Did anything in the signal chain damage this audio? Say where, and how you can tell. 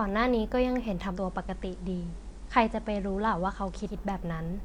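Yes. At the radio reception stage, this is digital radio blending to analogue. From 1.08 to 3.98 s the receiver cross-fades over about 133 ms to the FM feed: hiss creeps in roughly 35 dB under the speech, and level dips about 1 dB.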